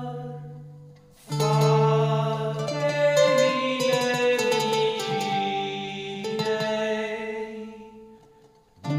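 From the very start to the end, a doubled audio track runs under the whole clip. A second full-band copy trails the first by roughly 200 ms. It sits at about the same level as the original. Every onset is heard twice, like a flat slap-back with no decay or room colour. The copy never fades or builds. The likely cause is the same signal being captured again through a slower path and mixed back in.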